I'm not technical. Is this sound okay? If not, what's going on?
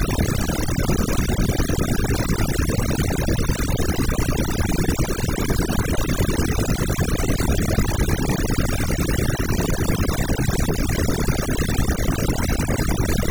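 No. Overdone noise removal runs throughout: a noise cleaner set too strong also strips the quiet parts of the speech, leaving twinkling specks between phrases.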